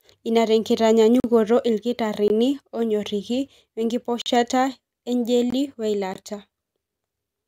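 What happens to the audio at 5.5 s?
At 5.50 s there's a block of digital silence: from 5.50 to 5.52 s, about 20 ms, the speech drops straight to zeros and snaps back with no fade. It comes across as a tiny hole.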